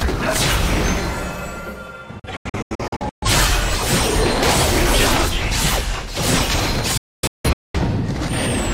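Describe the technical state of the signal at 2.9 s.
At 2.9 s the signal is inside a digital broadcast dropout running from 2.19 to 3.28 s. The receiver mutes on failed frames, so the audio breaks into several holes, about 512 ms lost in total, none longer than 128 ms. The waveform shows flat silent gaps with 3 ms fades, and the spectrogram shows blank vertical bands.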